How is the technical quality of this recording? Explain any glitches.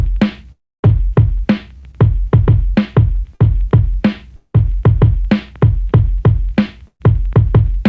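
The recording is marred by repeated network glitches: two dropouts, three packet-loss bursts and one brief concealed loss. The sound passed through a G.722 call path, so nothing appears above 8 kHz.

From 0.52 to 0.89 s and from 4.36 to 4.56 s there are long network dropouts, where incoming audio likely stopped. The receiver extended the last sound as a fading buzz, then left silence: about 0.27 s in the first and 0.1 s in the second. On a spectrogram this shows as smeared, decaying bands ending in a blank column. The waveform shows a flat gap.

Bursts of packet loss occur at 1.78–1.85 s, 3.35–3.42 s and 6.88–7.02 s. In each, the last sound is held and faded, then playback resumes with material missing. The 0.12 s third burst ends in about 70 ms of silence, visible as a thin empty strip.

Short concealed packet loss at 1.91–1.95 s patched a 16 ms hole with continued sound. It is heard as a quick smear, visible only as a slight blur in the spectrogram.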